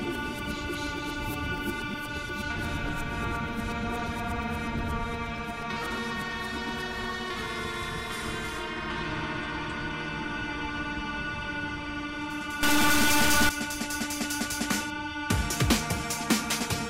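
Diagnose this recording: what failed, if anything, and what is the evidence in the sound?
From 12.63 to 13.49 s the sound turns harsh and buzzy, and quiet moments fill with noise. This is a stuck bit, likely in the converter or its data line. Samples jump by a step of about -20 dBFS, leaving square offsets on the waveform and a broadband smear on the spectrogram.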